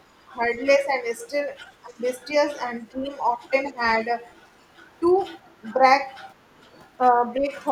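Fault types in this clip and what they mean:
other side's voice leaking through: Two short, very faint scraps of a second voice sit under the speech, at 0.53 to 0.58 s and 3.66 to 3.7 s, roughly 35 to 40 dB below the main talker. This is likely loudspeaker sound reaching the microphone that the echo canceller failed to remove. On a spectrogram each appears as a brief, pale smudge of harmonic energy. On the waveform they are barely visible against the speech.
speech suppressed in double talk: The talker's level sags briefly at 1.84 to 2.01 s, 2.95 to 3.04 s, 3.37 to 3.52 s, 5.64 to 5.84 s and 7.1 to 7.5 s. The drops range from about 5 to about 15 dB, and the deepest one comes first. This likely happens because the echo canceller could not separate the talker from the loudspeaker echo while both sides spoke, so it turned everything down. The waveform envelope pinches inward at these points, and on a spectrogram the speech bands fade there.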